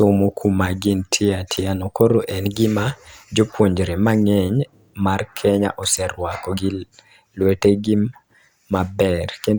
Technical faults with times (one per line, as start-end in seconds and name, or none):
2.45-2.48 compressed frames skipped
6.57 compressed frames skipped